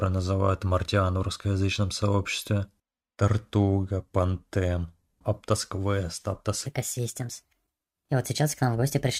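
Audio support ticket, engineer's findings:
Section at the wrong speed, 6.66 s to end: speech abruptly turns hurried and high, about five semitones up, running 1.3x. Speed and pitch shift together. Likely a playback or edit stage resampling this tail against the wrong clock rate.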